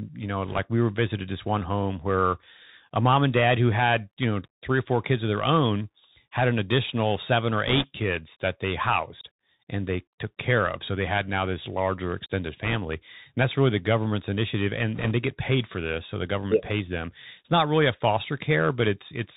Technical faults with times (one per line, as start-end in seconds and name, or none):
0.00-19.36 Bluetooth CVSD headset codec
0.47-0.60 bit errors on a Bluetooth voice link
7.67-7.84 bit errors on a Bluetooth voice link
12.64-12.77 bit errors on a Bluetooth voice link
14.96-15.12 bit errors on a Bluetooth voice link